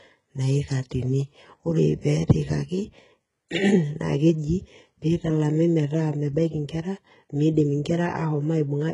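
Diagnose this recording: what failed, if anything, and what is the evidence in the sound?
Codec stage: s sounds are gritty and lispy throughout, with nothing above 11 kHz. This is likely HE-AAC compression near 12 kbps; a spectrogram shows blurred, copied-upward treble bands.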